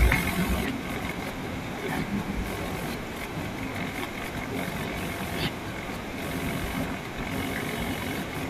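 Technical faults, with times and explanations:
0.64 s and 1.88 s, damaged data in a compressed stream: at each point a brief blip cuts into the speech, lasting under 20 ms. Part of the encoded data there was corrupted, so the decoder could not read those frames correctly. It briefly produced garbled output, then lost sync and searched for the next valid frame header before normal decoding resumed. That short stretch of misread data is what makes the abrupt, unnatural blip.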